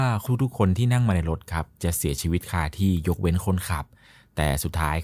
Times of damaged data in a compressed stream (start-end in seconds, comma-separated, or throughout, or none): none